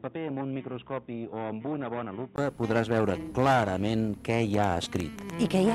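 From the start until 2.38 s the audio comes through what is likely a poorer input device, an input switched to a different microphone or a headset's call profile. Nothing is present above 3.8 kHz, so the sound is dull and boxy; it sits about 10 dB lower and carries its own faint background noise, about 40 dB down. Unlike a plain low-pass filter, the level, noise floor and tone all change together, and a 20 ms silence marks the switch back to the clearer sound.

From 4.54 s to 5.31 s a train of clicks ticks over the sound, about seven short pulses at roughly 6.6 per second, spaced unevenly and peaking around 10 dB above the signal. The likely source is interference from nearby equipment or a faulty connection or power supply. What separates this from random crackle or dropout pops is that the clicks share much the same shape, keep an ongoing pace, and stay audible in the gaps as well.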